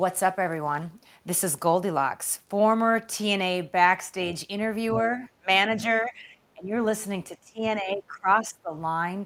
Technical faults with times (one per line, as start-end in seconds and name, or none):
5.37-6.30 speech suppressed in double talk
6.55-6.75 speech suppressed in double talk
7.29-8.72 speech suppressed in double talk